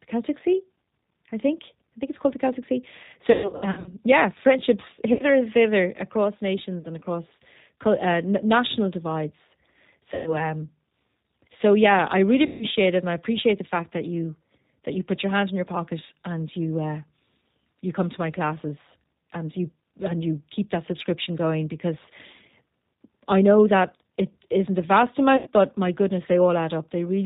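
G.729 coding runs through the whole speech clip, audible throughout: the 8 kbit/s codec rebuilds each 10 ms frame from a vocal tract filter, a pitch predictor and a few pulses, so nothing above 4 kHz survives and the voice sounds rough and slightly synthetic.

VoIP packet loss concealed by the speech codec strikes six times. From 3.32 to 3.95 s about 360 ms of audio goes missing in runs of up to 120 ms. Further losses fall at 5.13 to 5.24 s, after "yeah friendships" and before "and thither across"; at 6.81 to 6.87 s, before "and across uh national"; at 10.14 to 10.40 s; at 12.46 to 12.65 s, between "so yeah I really" and "it and I appreciate"; and at 25.37 to 25.50 s. Each time the decoder stretches its last pitch and filter into a fading buzzy tone or coloured noise, and the voice stays weak briefly after packets return.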